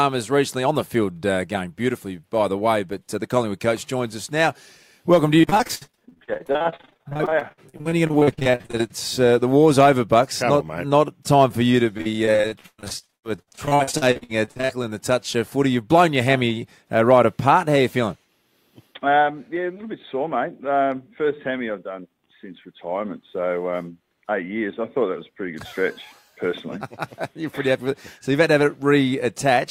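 From 5.41 to 8.92 s there is repeated packet loss, heard as robotic sound. Dozens of short holes appear, each under about 62 ms. Each is patched by stretching the last sound forward, so about 40% of the stretch is filler. The result is choppy. It returns from 11.98 to 14.86 s with fewer but longer holes, up to about 118 ms. About 42% is concealed.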